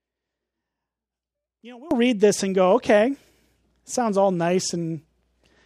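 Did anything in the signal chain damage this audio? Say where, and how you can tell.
Yes. From 0 to 1.91 s, before "read this and go", the speech sinks by about 22 dB and sounds faint. The likely cause is one channel inverted in the analogue wiring: reversed polarity cancels the shared centre in a mono sum, leaving only the channel difference.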